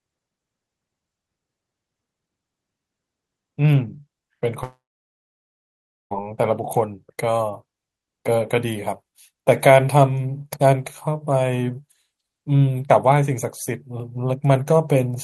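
From 4.63 to 6.14 s the speech breaks off. The last sound is stretched into a brief fading buzz, then about 1.32 s of near silence, and the talk resumes with roughly 1.48 s of material simply gone. This is likely a long network dropout. Unlike short packet-loss glitches, the concealment gives up and falls silent. Unlike a deliberate pause or edit, the sound trails off as a smeared continuation rather than stopping cleanly.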